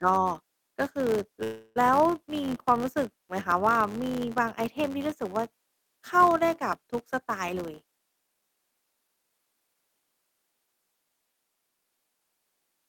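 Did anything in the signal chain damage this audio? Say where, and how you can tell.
Yes. A filter restarted on every block runs through the whole clip: a buzz at about 93.8 Hz tracks the speech level, which fits a 512-sample buffer. The filter starts each block from silence, so every block opens with a small transient.

A call audio freeze occurs from 1.43 to 1.78 s, likely a network stall that emptied the jitter buffer. The last sound continues, fading, for 324 ms without going silent, then speech resumes where it stopped and nothing is lost.

A jitter buffer speed-up runs from 7.54 to 9.75 s. The speech plays about 14% fast at unchanged pitch and sounds hurried. The receiver cut short pitch-period slices repeatedly, roughly 300 ms in total, to drain a buffer that had filled beyond its target.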